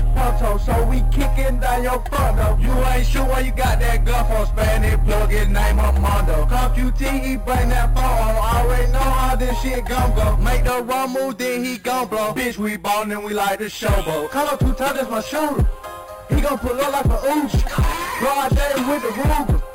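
Imaging from sample-and-hold upsampling runs throughout. Unsmoothed repeated samples, consistent with an 11 kHz source rate, mirror the spectrum into 5.5 to 11 kHz as metallic fizz about 20 dB down.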